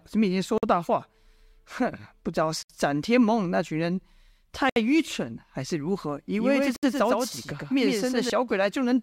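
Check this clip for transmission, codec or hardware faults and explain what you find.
Two faults are present in the speech: recurring short silences from joined encoded pieces, and a doubled audio track near the end.

The gap at a join of encoded pieces occurs at 0.58 s (about 50 ms), then at 2.63, 4.70 and 6.76 s (about 67 ms each). The pieces were encoded separately and butted together untrimmed, so each encoder's start-up delay and final-frame padding remain. Sound drops out, its edges smeared by the codec, then resumes where it left off. Unlike random packet dropouts, the holes recur exactly every 2 s.

The doubled audio track runs from 6.39 to 8.30 s. A second full-band copy trails the original by roughly 100 ms, about 5 dB quieter, likely from a slower capture path or overlapping edit. It differs from room echo by having no decay or reverberant colour, and starting and stopping abruptly.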